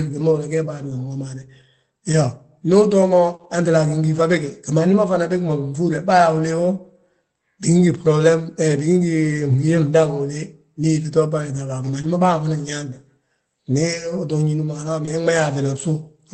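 Speech over a call link, band-limited to about 8 kHz, with two kinds of packet trouble. The first is lost packets rebuilt from error correction, at 0.89–0.91, 2.11–2.13, 3.39–3.45, 4.17–4.23, 12.03 and 15.07–15.09 s. Each patch runs 20 or 40 ms, which fits one or two Opus packets going missing and the decoder playing the lower-bitrate copy tucked into the following packet. Nothing drops out, but those moments turn briefly grainier and noisier. The second is short concealed packet loss, at 3.35–3.41, 12.01–12.05 and 15.05–15.09 s, covering 40, 20 and 20 ms. There the receiver had nothing in time and stretched the preceding sound, pitched if voiced, shaped noise if not, before crossfading back. You get a quick smear or wobble, and at 3.35 it butts straight into the rebuilt stretch.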